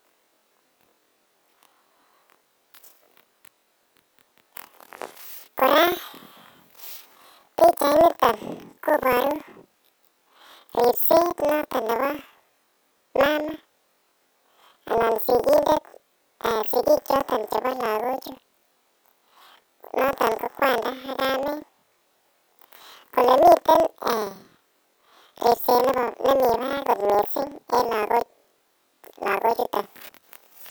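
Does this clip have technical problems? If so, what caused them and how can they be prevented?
Yes. Throughout the speech, each block of roughly 46 ms, which fits a 2048-sample buffer, plays twice at double speed, left then right: planar audio read as interleaved. That gives an octave-high pitch with a 21.5 Hz flutter, but unlike a sample-rate mismatch, the overall pace stays normal. Prevent it by matching the reader to the buffer's planar or interleaved layout.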